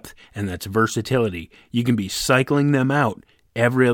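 A short piece of speech, with no technical fault anywhere in it. Nothing in the recording calls for a time, a cause or a correction.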